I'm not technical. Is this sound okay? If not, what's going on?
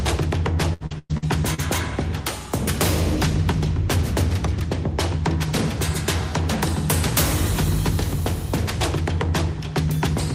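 No. From 0.73 to 1.60 s there is repeated packet loss (robotic sound): five short holes in quick succession, the longest 110 ms, each patched by stretching the sound just before it. Unlike a single dropout, it's a choppy run of gaps.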